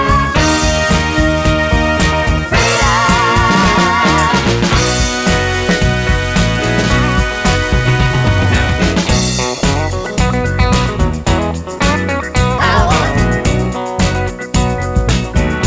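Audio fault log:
The signal has no faults, and its content ends at 8 kHz, which fits a wideband call path such as G.722 at 64 kbps working as normal.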